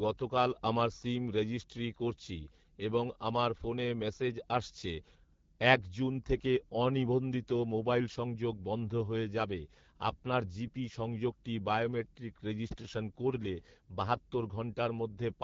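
The speech has been run through the AMR wideband (HD Voice) codec at 8.85 kbit/s, one of its lowest rates. Here the pulse-driven vocal tract model is starved of bits, so the whole clip sounds rough and raspy, and the band above 6.4 kHz is filled with shaped noise.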